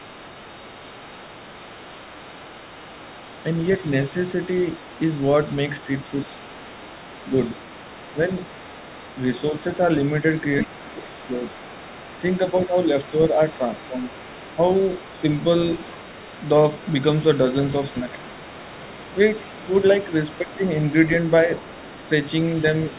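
From start to end, a faint second voice sits about 20 dB below the talker, most likely the other side's voice leaking through from a loudspeaker that the echo canceller did not fully remove. It stays audible as a separate voice underneath, not as a distortion of the main one, and it is heard through the narrowband G.711 call path with nothing above 4 kHz.

Speech suppressed in double talk follows, at 7.27 to 7.32, 10.65 to 11.41, 12.21 to 14.12, 17.93 to 18.18 and 20.4 to 20.59 s. The talker's level briefly sinks by around 5 to 20 dB, deepest near 11 s, likely because the canceller turned everything down while both sides spoke. These are level dips tied to the overlap, not clean dropouts from lost packets.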